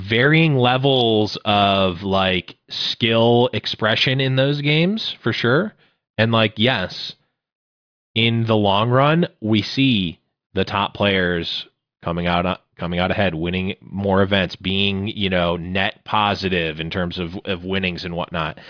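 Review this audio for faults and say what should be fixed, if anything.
Nothing here needs fixing, as the speech signal shows no technical faults at any point in the recording.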